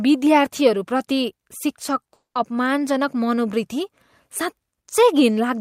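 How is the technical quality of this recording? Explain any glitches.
The recording has two network-related glitches close together, both just before "अपमानजनक मनोवृत्ति".

Short concealed packet loss, 2.03 to 2.07 s: About 20 ms of the 40 ms stretch was lost and rebuilt by the receiver, which extended the preceding sound before blending back into the real signal. You hear a brief smear or wobble.

Long network dropout, 2.13 to 2.37 s: About 220 ms of audio never arrived, likely because of a network stall in transmission. The receiver first continued the last sound as a fading buzz or hiss, then left about 120 ms of silence before the real audio resumed with that stretch missing. A spectrogram shows the concealed sound decaying, followed by a blank gap. On the waveform, the amplitude tapers away to flat before the signal abruptly restarts.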